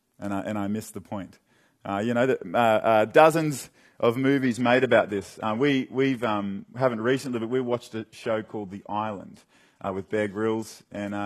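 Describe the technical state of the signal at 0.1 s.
At 0.1 s the speech signal is intact, with no audible fault at that moment.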